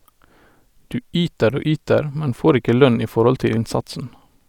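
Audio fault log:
3.57 s, compressed frames skipped: Just after "ikke lønn i forhold", the speech jumps forward. Roughly 70 ms of audio never plays. That fits about two whole frames of 32 ms each going missing, either absent from the file or rejected by the decoder as damaged. The jump is a multiple of the frame length.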